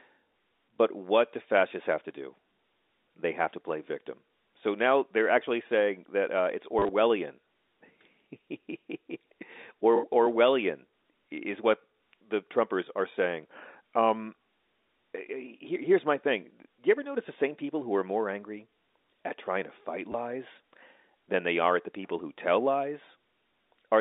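Packet loss with the last packet repeated occurs at 6.79 to 6.89 s, where about 70 ms went missing in runs of up to 30 ms, fitting 10 ms packets, and again at 20.12 s for 20 ms. Each gap is filled by replaying the previous packet, producing a brief robotic stutter over the narrowband telephone-line sound.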